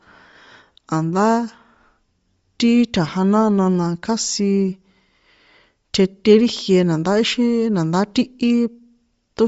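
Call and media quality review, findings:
Bluetooth LC3 compression throughout, likely cause. Speech band stops near 7.7 kHz, with grainy, breathy upper hiss from noise-filled zeroed bins. Texture fits a 10 ms frame near 32 kbps. A plain low-pass would cut the top cleanly, without that synthetic fizz.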